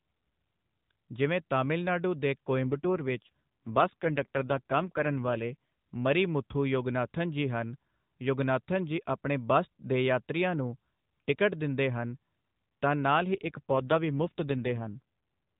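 Speech over an AMR narrowband mobile link hits two AMR rate drops: 2.62 to 5.56 s, after "ਜਿਵੇਂ ਤਮਿਲ ਨਾਡੂ ਦੇ" until "ਮਰੀ ਮੁਥੂ ਯੋਗਨਾਥਨ ਜੀ", and 13.34 to 15.0 s, after "ਤਾਂ ਨਾਲ". The voice turns buzzier, which points to a step from 12.2 to about 5.9 kbps. Unlike packet loss, there is no gap and the band stays the same.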